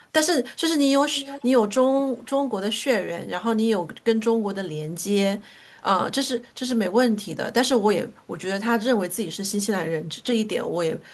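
A speech clip where the far end's echo canceller likely let loudspeaker pickup through. From 1.14 to 1.48 s, an echo leak adds a faint copy of the speech, delayed about 330 ms.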